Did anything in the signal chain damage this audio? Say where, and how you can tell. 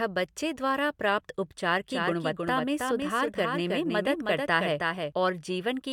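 Yes. A doubled audio track runs from 1.90 s to 5.12 s, starting just after "बच्चे द्वारा प्राप्त उपचार". A full-band copy trails the original by about 300 ms, roughly 5 dB quieter. It is likely from a slower second capture path or a misaligned edit. Unlike acoustic echo, it has no decay or room colour, and it starts and stops abruptly.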